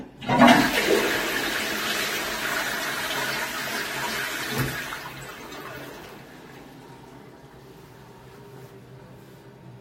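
Adaptive stream starting at a low bitrate, 0 to 6.0 s: dull, artefact-laden treble, fitting roughly 32 kbit/s AAC, jumps cleaner without a gap once the player steps up.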